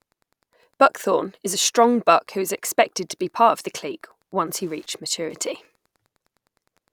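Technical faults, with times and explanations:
Throughout, Wi-Fi interference: faint ticking every 102.4 ms, about ten a second, from a nearby radio's beacon rectified in the audio circuit, well below speech.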